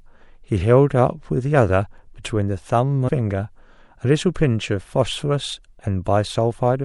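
Speech with a watery, swirly texture throughout, dulled treble and metallic chirps on s sounds. This plainly audible damage is likely MP3 compression at a low bitrate, around 64 kbps, where the encoder trims the top end and lets weak frequency lines flicker on and off between frames. Between 3.07 and 3.09 s, compressed frames are skipped. The speech jumps ahead by roughly a fifth of a second, and the join is a short smeared blip rather than a click. Several 26.1 ms frames were never decoded, and their overlapping neighbours blur the seam.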